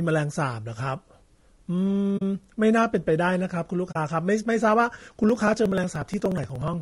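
The whole clip has a rough, grainy edge, with noise between the harmonics and a thin synthetic top end, likely low-delay AAC compression at something like 32 kbps.

From 2.17 to 2.22 s and again from 3.91 to 3.96 s there's AAC frame loss with muting. About 40 ms of speech gets zeroed and fades out and back in as a soft-edged hole.

From 5.18 to 6.74 s come periodic USB or driver dropouts. Roughly 4 ms gets skipped every 60 ms, about thirty times, giving a steady ticking under the speech.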